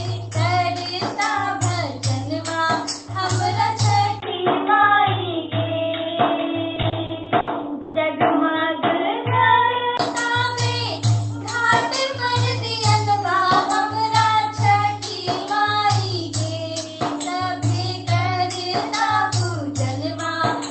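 At 4.20 s the audio drops out for about 20 ms. It then turns dull and boxy, with a new noise floor about 45 dB down. The level stays about the same. The likely cause is an input switched to a poorer device. The full band returns at 9.99 s. Inside that stretch, from 6.75 to 7.96 s, there are repeated stalls (stutter). The sound hangs and drags seven times. Held sound fills about 310 ms of the gaps, and the longest lasts 130 ms. Nothing is lost. Packets reached the jitter buffer late and drained it each time.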